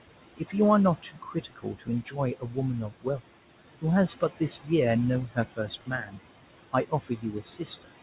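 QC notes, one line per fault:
Throughout: noise suppressor artifacts. The suppressor pulls steady room noise down by about 17 dB each frame, so the residue pumps between phrases and rises under the narrowband, 4 kHz-limited speech.
0.36–0.54 s, 1.02–2.57 s, 2.9–3.21 s, 4.2–4.7 s, 5.28–6.19 s, 6.73–7.88 s: speech cut by the noise suppressor. It mistakes soft speech for noise, dropping it by about 17–18 dB, so the quiet parts sound swallowed.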